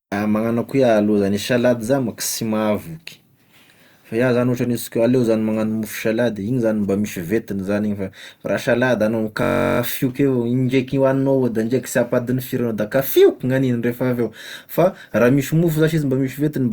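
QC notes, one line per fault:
9.43–9.79 s, system hang loop: after "salady anao", a 21.33 ms slice of audio repeats 17 times, a steady buzz at about 47 Hz, consistent with a 1024-sample buffer cycling while the system froze. Speech resumes on "avao indraiky hoagnignao da", with little or nothing lost.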